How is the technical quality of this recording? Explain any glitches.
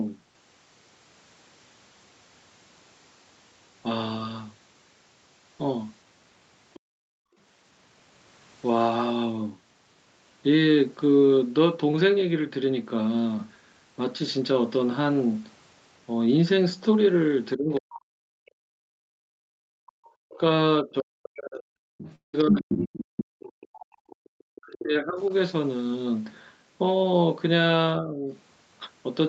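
The recording has several call-related glitches, clustered around 7 seconds and across the stretch from about 17.6 to 28.3 s. The audio tops out around 8 kHz, which fits a wideband call codec running near 32 kbps.

Other side's voice leaking through happens twice. From 6.74 to 6.80 s, a faint second voice appears, roughly 25 dB below the talker. From 17.96 to 24.44 s, it is much stronger, only about 10 dB down. The likely cause is the far end playing on the talker's loudspeaker while the echo canceller leaves a residue in the microphone. Unlike a background gate, this adds sound rather than removing it.

Background gated by the echo canceller follows the leak. From 6.80 to 7.37 s, the room tone drops by up to about 34 dB for roughly half a second in total. Between 18.80 and 21.98 s, it dips again, by up to about 37 dB, for around a second altogether. The canceller clamped the microphone while the loudspeaker was active. 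What sets this apart from a dropout is that the ambience alone vanishes and then returns, with no concealment buzz.

Speech suppressed in double talk runs from 17.56 to 28.30 s. The talker's own voice sinks by as much as roughly 40 dB in pieces adding up to about four seconds, losing its brightness or cutting out. The likely reason is that both sides spoke at once and the canceller could not separate the talker from the echo, so it pushed both down. It differs from gating because the speech itself is hit, not just the room.

A long network dropout sits at 22.15 to 22.35 s, with about 180 ms missing. The receiver extends the last sound as a fading buzz, then leaves roughly 130 ms of silence before audio resumes further on. Lost packets are the likely cause. Its tell is the decaying synthetic tail followed by a gap, which no canceller produces.

A short concealed packet loss occurs at 24.93 to 24.97 s, with about 20 ms missing. 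The decoder filled the hole by continuing the preceding sound and then blended back into the real audio. It is heard as a brief smear or wobble, far too short to leave a silent gap like the dropout.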